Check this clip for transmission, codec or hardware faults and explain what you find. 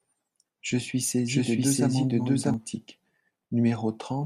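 One fault is present: a doubled audio track from 1.28 s to 2.54 s. In that stretch the speech is heard twice. A second copy trails the original by roughly 0.7 s, at about the same level. The likely cause is a second capture of the same signal through a slower path, or an edit holding two copies out of step. The copy is dry, full-band and without room tail. It starts and stops abruptly.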